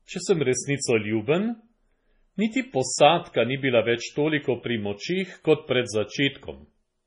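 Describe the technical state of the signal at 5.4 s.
MP3 compression artefacts are present at 5.4 s, as they are throughout the clip. Heavy damage and nothing above 10.5 kHz point to a likely low-bitrate MP3 encode, around 24 kbps. Short of bits, the encoder cut the treble and dropped weak frequency lines from frame to frame, so the speech sounds dull, watery and swirly, with smeared attacks.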